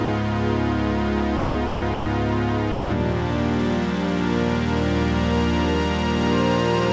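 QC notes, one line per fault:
0.05–0.08 s, 1.37–1.55 s, 1.67–1.82 s, 1.94–2.06 s and 2.72–2.90 s: sound dropped by the voice detector. The music cuts out five times and gives way to a flat, steady hiss. The gaps last 30, 180, 150, 120 and 180 ms. The three around 1.4–2.1 s come in quick succession. The likely cause is a sender's voice detector that took the music for background and stopped sending. The receiver then filled each gap with comfort noise until the music triggered the detector again.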